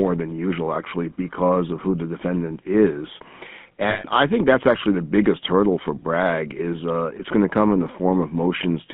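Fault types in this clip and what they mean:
GSM full-rate codec: Sparse regular pulses drive a vocal-tract model across the whole clip, adding a plainly audible buzzy, gravelly roughness. The spectrogram shows a hard band from 150 Hz to 3.5 kHz with grainy, smeared harmonics, which fits a 13 kbps GSM coder.
lost GSM frames: From 3.9 to 4.05 s, just before "I think that's actually", about 140 ms (roughly seven frames) is replaced by the last good frame repeated, a rough metallic ring. The spectrogram shows frozen horizontal streaks, and the waveform shows a repetitive envelope.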